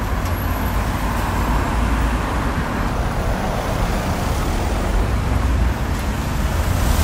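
A recording of everyday sounds. From 2.91 to 5.03 s there is a section at the wrong speed. It runs at 0.844 times normal speed. Everything turns slower and deeper, roughly three semitones down. Speed and pitch snap back together at the end. The likely cause is playback against the wrong clock.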